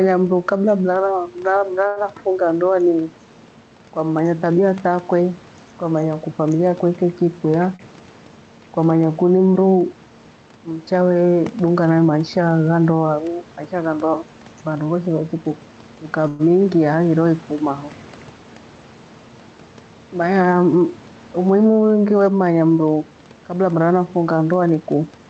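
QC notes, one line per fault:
throughout: gain pumping. The room noise is about 29 dB below the speech. The level swings by about 5 dB. This is likely a gain set far too high, with a fast limiter pulling it back on every peak.
1.87–1.98 s and 7.76–7.81 s: short stall from a late packet. The sound is held too long, by 88 ms just before "a ndoa" and by 33 ms at 7.76 s. A packet was late and the buffer ran dry. The last sound was stretched until it arrived. Nothing is lost.
7.45–7.76 s, 15.21–18.44 s and 24.52–25.26 s: jitter buffer speed-up. The speech runs faster at unchanged pitch: 112%, 103% and 111%. About 50, 100 and 100 ms were cut in small pitch-period slices. This drained excess buffered delay and makes the talk at 112% and 111% sound hurried.
16.28–16.41 s: call audio freeze. The last sound is drawn out as a fading sound for 116 ms, with no true silence. Then the speech resumes where it stopped. 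Packets were likely held up in transit, emptying the buffer. Nothing is missing, but a gap is inserted.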